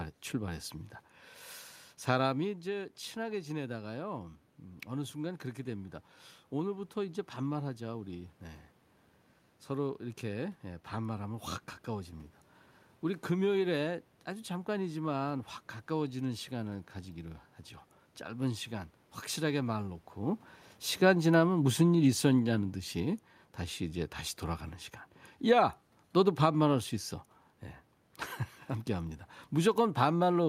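From 19.44 to 22.66 s the automatic gain control judges the input too loud or too noisy and pulls its gain down gradually, by about 3 dB in all. Because the reduction is applied to the whole signal, the speech and the room noise sink together over those three seconds. A talker moving near 20 s also changes the level, but only the voice shifts there, not the background.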